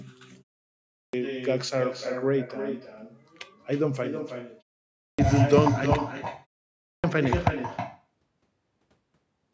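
From the first syllable to the end, every phrase is trailed by a second copy arriving roughly 0.3 s later and about 8 dB quieter: echo with no canceller. The far end's loudspeaker feeds back into its microphone, and nothing subtracts it before it returns. On a spectrogram each speech burst has a fainter, slightly smeared duplicate shifted right. On the waveform, decaying tails spill past each phrase into what should be gaps.

At 0.82 s, after a 0.47 s pause, speech bursts in already underway. About 310 ms of its onset is missing, a clipped start after a pause: the output path went idle in the silence and took that long to wake. The same happens at 4.87 s (about 320 ms lost, after 0.33 s of quiet) and at 6.69 s (about 350 ms lost, after 0.31 s). The waveform jumps from flat straight to speech level with no rising edge, and the spectrogram shows hard vertical starts lacking the usual consonant onsets.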